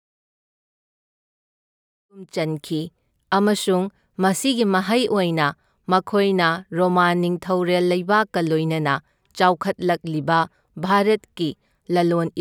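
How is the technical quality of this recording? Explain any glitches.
No glitches turn up here; the speech simply eases in from around 2 s, reaching full level by about 2.59 s the way an editor would fade it, with nothing out of place after that.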